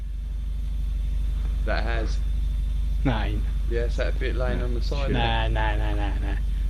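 Nothing wrong is audible anywhere in the clip; no technical faults to report.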